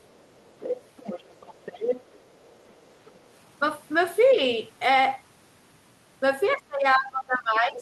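From 0.02 to 3.23 s, the other side's voice is leaking through: a second voice sits roughly 15 dB under the talker, likely left over because the echo canceller did not fully remove loudspeaker sound from the microphone. A spectrogram shows a faint, separate set of harmonics underneath.

From 6.55 s to the end, the speech is suppressed during double talk. With both sides talking, the canceller likely turned the talker down along with the echo, so the voice dips by up to around 25 dB.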